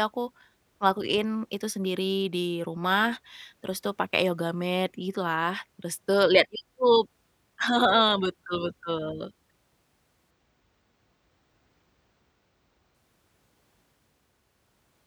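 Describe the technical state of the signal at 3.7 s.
At 3.7 s the signal is intact, with no dropout, clipping, distortion or other fault audible at that moment.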